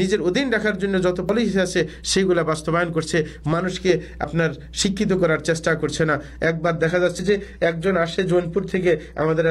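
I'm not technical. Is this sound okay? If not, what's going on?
No. At 1.29 s and again at 7.19 s the sound jumps forward, as if a tiny sliver of about a twentieth of a second were cut out and the two sides butted together. The likely cause is audio missing between chunks: the recording is handled in pieces, and a bit gets dropped at the join.

From 6.46 s to the end, the sound suddenly turns duller, with the crispest top end gone (nothing above about 14.9 kHz). That is an adaptive stream at a lower bitrate: the connection slowed, so a lower-quality version played.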